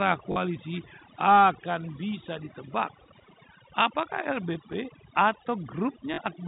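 Overdone noise removal runs through the whole recording. The noise reducer was set too aggressively, so it cuts individual frequency bands whenever they fall near its noise estimate, and the quieter parts of the speech are cut with them. The background drops to near silence with small twinkling specks.

From 0.32 to 0.36 s there is packet loss with the last packet repeated. About 40 ms of audio is missing, consistent with two 20 ms packets, and the receiver filled the gap by replaying the last good packet. The short run produces a brief robotic stutter with a buzz near 50 Hz.

Between 0.53 and 1.16 s a faint delayed copy of the speech appears, trailing the original by 423 ms at roughly 30 dB below it. This is likely echo leak: the far end is playing the call on a loudspeaker, and its echo canceller failed to remove all of the sound reaching its microphone. Shorter, fainter scraps with the same 423 ms delay recur at 2.47 to 2.53 s and at 3.17 to 3.26 s, sitting roughly 35 and 40 dB down.

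At 6.14 to 6.18 s the same packet loss with the last packet repeated returns. Another 40 ms gap, again consistent with two 20 ms packets, is patched with a replayed packet, giving a second stutter with the same buzz. Throughout the clip, the G.711 telephone coding limits the audio to below 4 kHz.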